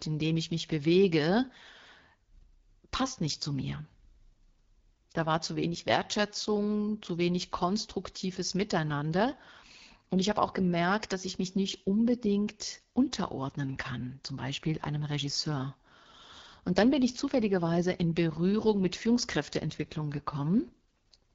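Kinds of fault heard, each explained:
AMR wideband (HD Voice) codec: speech runs throughout through the AMR-WB coder near 8.85 kbit/s, one of its lowest rates, giving plainly audible rough, raspy texture.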